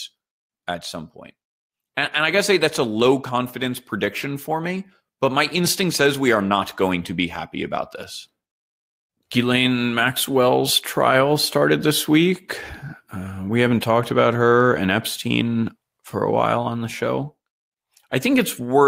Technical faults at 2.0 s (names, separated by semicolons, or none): lost packet rebuilt from error correction